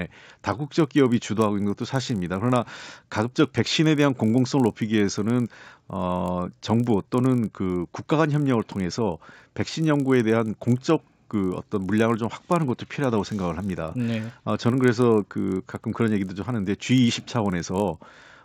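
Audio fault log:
Throughout: resampler restarted on every block. The speech was converted from 16 kHz to 48 kHz in 20 ms pieces, each handled without the samples around it, so every block edge carries a small error. Repeating 50 times a second, these errors merge into a 50 Hz buzz that rides on the speech and vanishes in pauses. That signal dependence separates it from mains hum, and the absence of gaps separates it from dropouts.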